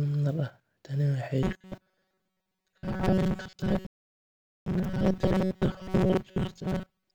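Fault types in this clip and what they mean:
Robotic sound from repeated short buffers: audio likely arrived too slowly, so short chunks were repeated, turning speech from 1.43 s onward into a rigid metallic buzz near 188 Hz.
Playback stall: the player was likely starved of data or blocked, and the speech cuts to silence from 3.87 s for about 0.8 s before resuming.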